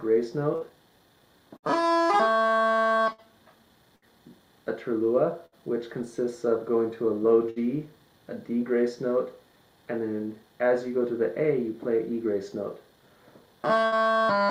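A burst of packet loss occurs seven times, at 0.55, 1.57, 3.13, 3.96, 5.46, 7.50 and 13.86 s. Each time about 60 ms of audio failed to arrive. The receiver filled roughly 53 to 61 ms by extending the last sound and fading it down, heard as a short held buzz or decaying hiss. Playback then resumes past the lost stretch, so the sound jumps slightly forward at each gap.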